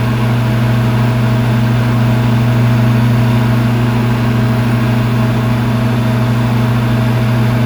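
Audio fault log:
No technical faults are present, with nothing in the playback chain disturbing the sound.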